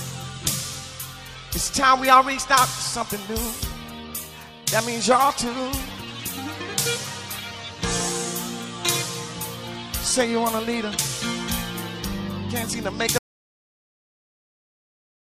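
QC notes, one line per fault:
13.18 s to the end: audio dropout to silence. The sound stops abruptly in mid-flow and never returns. The last 2.1 s or so are silent, with no room tone or noise floor left underneath. The input was likely lost, through a disconnected device, a failed link or an accidental mute, while recording carried on writing silence. Anything after 13.18 s is gone.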